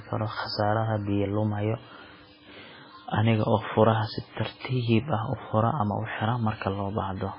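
From start to finish the speech sounds dull and watery, with a swirling, warbling texture and nothing at all above 5.3 kHz, so the top of the sound is simply missing. This is heavy MP3 compression, likely at a very low rate around 16 kbps. Starved of bits, the encoder chops off the treble at a fixed point and drops weaker frequency components, which flicker in and out between frames and blur sharp onsets.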